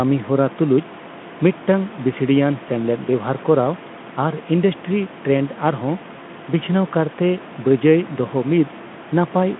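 No faults: the room noise sits about 22 dB below the speech, and the Speex path carries a band of roughly 150 Hz to 3.5 kHz at 18.2 kbps with nothing more than faint coding texture.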